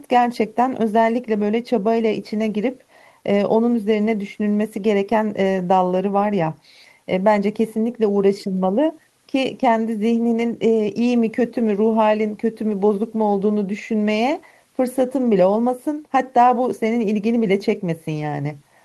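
A speech recording with no technical faults anywhere in it. No problem can be heard at any point, so there are no times or causes to give.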